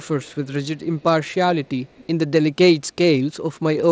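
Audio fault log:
0.04–0.53 s, 1.65–1.69 s and 1.86–2.07 s, echo leak: a faint delayed copy of the speech trails the direct sound by 220 ms, about 30 dB down in the first and third stretches and fainter still in the brief middle scrap. The fixed delay and low level point to a far-end loudspeaker whose sound reached that microphone and slipped past an echo canceller that likely didn't fully adapt, so the residue was sent back into the call.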